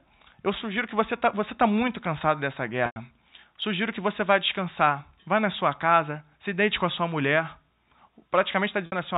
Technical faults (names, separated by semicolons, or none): packet loss with pitch repetition